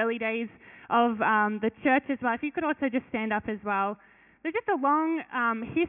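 Nothing in the clip stands out as a technical fault; it just runs along without any glitch worth pointing to.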